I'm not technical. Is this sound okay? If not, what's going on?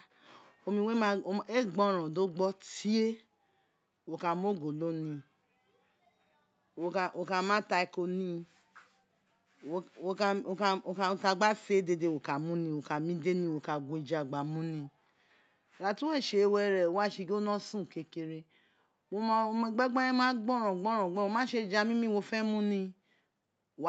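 Yes, no faults here; the speech has the ordinary sound of an Opus internet call, with the microphone processing and the call's codec keeping everything below about 8 kHz, as a call normally does.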